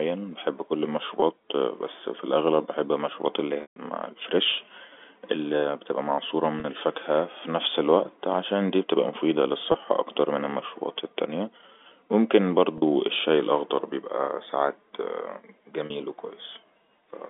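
At 1.20–1.22 s, between "بحب كل" and "بس في الأغلىب بحب", there is packet loss with pitch repetition: the receiver loops the last pitch period to cover the missing 20 ms, producing a brief buzzy hold. Similar 20–40 ms patches occur at 6.60–6.64, 9.72–9.74, 12.78–12.82 (before "الشاي الأخضر بيبقى سعات") and 15.86–15.90 s. After "في الأغلىب بحب المشروبات", the 140 ms loss at 3.62–3.76 s fades toward silence before the speech cross-fades back. A plain dropout would leave dead silence or a click, but here the gaps are filled with repeated pitch, heard through the narrow telephone band.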